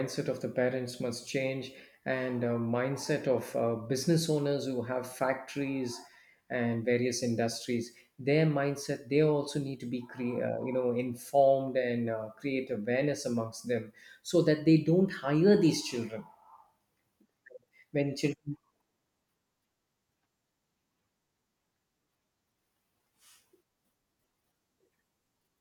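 Nothing goes wrong anywhere in this recording of speech, so there's nothing here to flag.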